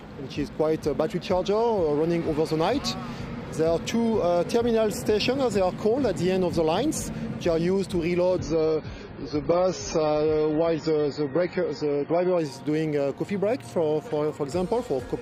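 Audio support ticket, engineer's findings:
Adaptive stream at a lower bitrate, 8.39 to 12.39 s: sudden gapless quality drop, nothing above 7 kHz, heavier codec artefacts. Fits a fall from roughly 96 to 16 kbit/s AAC.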